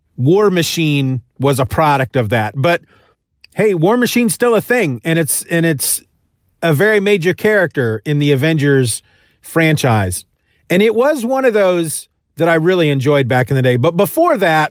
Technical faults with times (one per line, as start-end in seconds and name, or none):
none